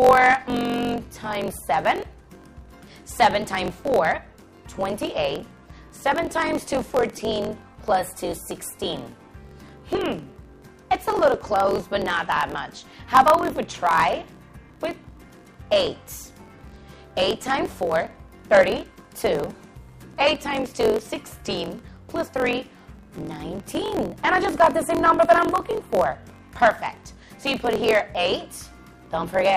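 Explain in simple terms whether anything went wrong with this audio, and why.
A block size mismatch (truncated) runs throughout. Each block's end is dropped. This causes a 45.9 Hz buzz, and the sound runs 1.07 times faster.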